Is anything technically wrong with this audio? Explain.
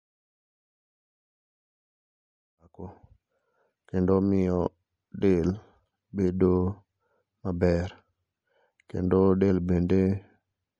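Yes. Throughout the speech there is plainly audible MP3 compression damage, likely from a low-rate encode, around 64 kbps. Weak detail flickers between frames. That leaves the sound watery and swirly, with metallic chirps on s sounds and smeared attacks, even through the smooth fade-in that starts near 2.5 s and ends at 3.2 s.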